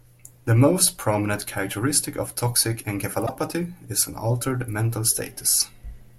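At 3.26 to 3.29 s, right after "prominent characteristic of toxic", and again at 5.54 to 5.62 s, after "is an altered mental", you get a corrupt frame decoded. A few damaged frames play through with scrambled energy, giving a sharp squeaky blip, with the second one louder.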